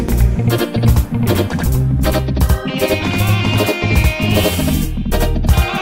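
The audio carries a channel delay doubling from start to finish. Every event is heard twice. The second copy arrives about 85 ms after the first, at the same level, so it reads as a tight slap echo rather than a room reflection. One channel is running late, and the two channels have then been summed to mono. That gap fits a 4096-sample buffer holding back one side. The fault stays constant across the clip.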